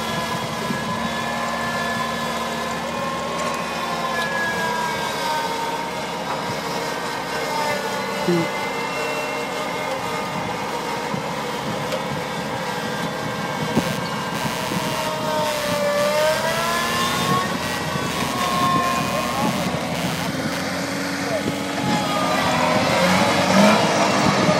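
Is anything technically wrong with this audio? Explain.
Yes. From 13.75 s to 20.98 s there is computer activity noise. Processor or graphics load shifts the shared ground and couples into the audio path. It sounds like a buzzing chirp, around 150 pulses per second, only about 10 dB below the sound.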